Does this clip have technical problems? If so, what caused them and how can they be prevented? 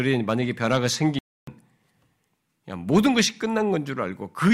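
Yes. A playback stall silences the speech from 1.19 to 1.47 s, about 0.29 s, likely from the player running short of data. Unlike a click or dropout, it is a clean, lasting gap. Larger playback buffering or a higher-priority audio thread would prevent it.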